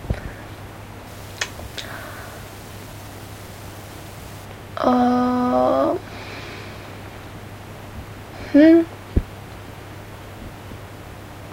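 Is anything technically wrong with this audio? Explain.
Yes. From 1.07 to 4.45 s there is low bit depth without dither. Quiet passages turn gritty, and the faintest parts sputter or vanish. The grain follows the sound, sitting roughly 25 dB below it. The likely cause is rounding to about 7 bits without dither.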